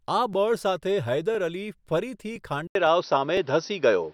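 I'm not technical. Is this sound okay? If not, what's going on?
No. Every half second, at 0.33, 0.84, 1.35, 1.85, 2.36, 2.87 and 3.37 s, a tiny 6.5 ms slice plays twice. That is overlapping chunks, heard as a regular click or stutter.

At 2.67 s the speech drops out briefly, then returns duller, at a different loudness and with new background noise. This is likely an input switched to a poorer device, such as a headset microphone.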